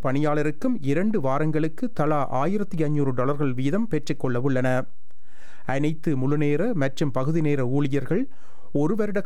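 From start to finish there's a DC offset: the whole waveform sits shifted off zero by a constant of about -24 dBFS. You won't hear it as such, but it eats headroom on one side and shows up as steady energy right at the bottom of the spectrum.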